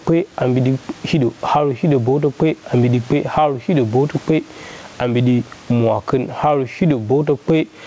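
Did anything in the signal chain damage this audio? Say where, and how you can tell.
Yes. Gain pumping runs through the whole clip, at the input stage. The swing is around 15 dB. Dynamics sound squashed. The likely cause is microphone gain set far too high, with a fast limiter clamping it down.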